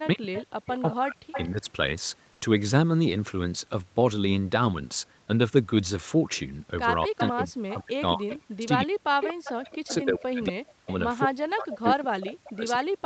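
From 0.0 to 1.66 s the speech is suppressed in double talk. The level dips hard, at worst by about 40 dB, and parts of the speech cut out. Roughly a second of it is affected. The likely cause is both sides talking at once. The echo canceller could not tell the local talker from loudspeaker echo, so it turned both down.

Inside that stretch, from 0.35 to 1.49 s, there is echo leak. A copy of the speech returns 233 ms late, about 10 dB below the speech. It likely comes from a far-end loudspeaker whose echo canceller let part of the pickup through and sent it back.

At 2.33 to 2.41 s the background is replaced by comfort noise for 80 ms. The real room sound gives way to a flat, featureless hiss about 3 dB quieter. This points to Opus DTX. The sender likely stopped transmitting during a pause, and the receiver filled the gap with synthetic noise.

From 7.06 to 8.97 s double-talk suppression returns. 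About 1.5 s of speech dips or drops out, again by up to about 40 dB. Echo leak overlaps it at 7.18 to 7.74 s, about 5 dB below the speech, and at 8.30 to 8.66 s, about 15 dB below. Both copies are 233 ms late.

More echo leak runs from 9.21 to 10.94 s at about 10 dB down. From 9.50 s to the end the speech stays suppressed, with drops of up to about 40 dB. From 11.73 s to the end the 233 ms echo is back, about 10 dB below the speech.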